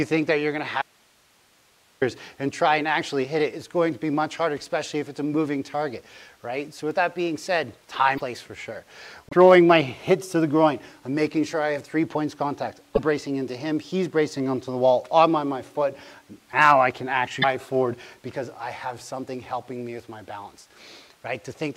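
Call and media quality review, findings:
Audio dropout to a faint residue, 0.82 to 2.02 s. About 1.2 s lost, only low hiss remains. Abrupt edges. Likely an upstream break while the path stayed live.

Broken MP3 bit reservoir at 8.17, 9.29, 12.95 and 17.41 s. Short jumps, 30 to 45 ms. Likely missing frames of about 26 ms each.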